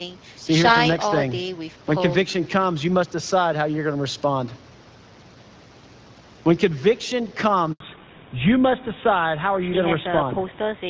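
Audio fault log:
7.72–7.80 s, handover gap: The speech cuts out and stays silent for 80 ms. The call was moving from one network to another at this point. No speech frames arrived while the link changed over. The voice fades within a few tens of milliseconds, and nothing comes through until the new connection carries audio. Whatever was said in that gap is lost.
7.80 s to the end, fallback to narrowband: Right after the gap, the top of the sound disappears. Nothing is left above 4 kHz. Before this, the HD Voice link carried speech well above that. Its light coding, which fits AMR-WB at 12.65 kbit/s, sounded clear. The call has dropped to an older narrowband codec, most likely GSM full rate. The voice is now duller, boxier and rougher, and sibilants lose their edge.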